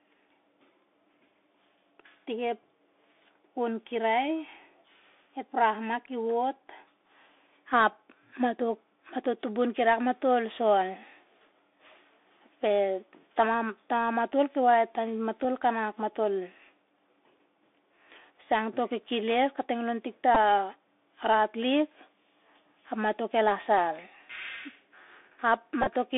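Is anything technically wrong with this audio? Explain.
Yes. The speech has passed through a Bluetooth CVSD headset codec. This one-bit delta coder, running at 64 kbit/s, tracks the waveform only with an adapting up-or-down step. The line is confined to roughly 300 Hz to 3.6 kHz, giving a narrow, muffled sound with plainly audible granular hiss, scratchy sibilants and distortion where loud high content outruns the step.

Three Bluetooth headset packet repeat events occur, where lost headset packets were replaced by decoding the previous packet's bits again. At 15.44 s, just before "kanak matol", and at 20.35 s, right after "to kekesel kating tik", brief repeats consistent with two and three lost packets produce a very brief buzz near 267 Hz. From 25.82 to 25.87 s, scattered repeats, the longest around 20 ms, form a short buzz near 267 Hz.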